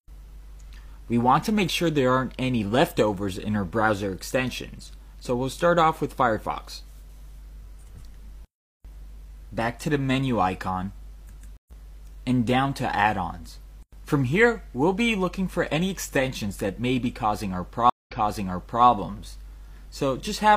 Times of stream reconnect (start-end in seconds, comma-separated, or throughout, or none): 11.57-11.71, 17.90-18.85